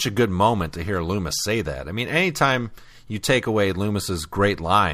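No audible technical faults present.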